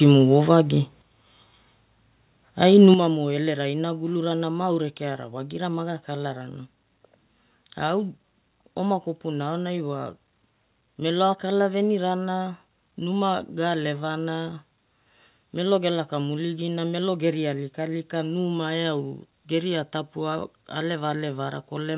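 At 1.02 s the speech and the background drop together in a single step of about 6 dB, and at 2.94 s, just before "elerai inagulura na ma", they drop again by about 7 dB. Each drop is instant, with no fade. The likely cause is a microphone volume stepped down by the call software, which lowered the device's input gain in one move each time. The audio also has nothing above 4 kHz, consistent with a G.711 A-law call path.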